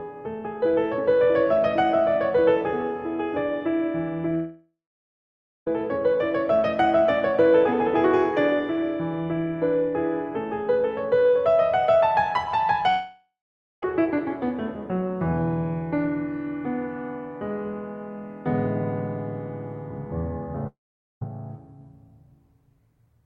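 Music with three gaps, at 4.35–5.67 s, 12.89–13.83 s and 20.67–21.22 s, each likely a long network dropout. The last sound smears into a fading buzz, then silence lasting up to 0.9 s. A spectrogram shows decaying horizontal streaks, then blank columns, before the music resumes with that passage missing.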